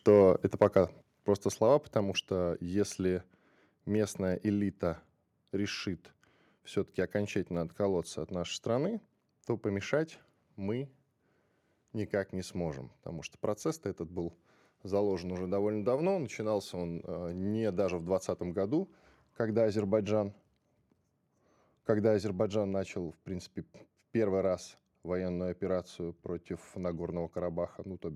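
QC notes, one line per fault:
0.08–0.3 s and 0.61–0.78 s, microphone overload: the loudest peaks are flattened, about 2 dB then about 4 dB over the limit, giving a harsh crackle just before "просто слова". The input gain was likely set too high.
1.02 s and 2.04 s, microphone volume stepped down: the voice and background drop abruptly, by about 6 dB before "просто слова" and about 2 dB before "что если". Automatic input-gain reduction is the likely cause.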